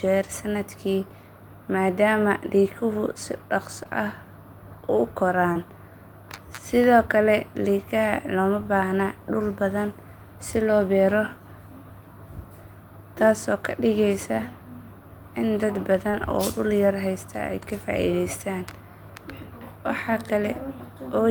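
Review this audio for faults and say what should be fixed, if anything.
Short concealed packet loss: about 20 ms of this speech arrived too late for the decoder at 3.83, 5.53, 8.63 and 16.11 s, and each gap was bridged by extending the preceding sound before crossfading back, leaving a brief smear or wobble. Deeper jitter buffering or forward error correction would prevent it.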